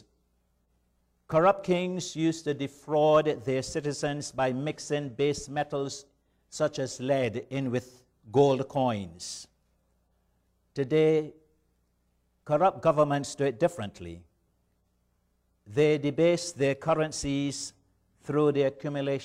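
Nothing in this audio stands out as a technical problem; it just runs along without any glitch worth pointing out.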